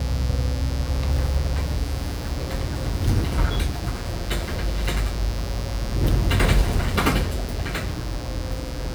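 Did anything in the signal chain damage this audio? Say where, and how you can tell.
Yes. Mains buzz, picked up in the analogue wiring, runs through the whole clip, strong at roughly 15 dB below the sound. Its raspy edge sets it apart from smooth hum: switching spikes at 120 Hz, twice each 60 Hz cycle, spread harmonics into the kHz range.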